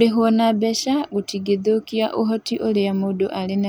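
A short speech recording with nothing technically wrong to point to. No timing or level problems stand out at any point in the audio.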